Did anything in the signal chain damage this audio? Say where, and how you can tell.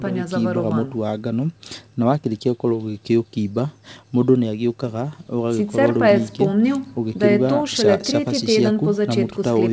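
No, nothing in the chain hurt this speech: it has simply passed through a call's microphone processing and G.722 wideband telephone coding, which is why nothing reaches above about 8 kHz, and that's just what those stages do.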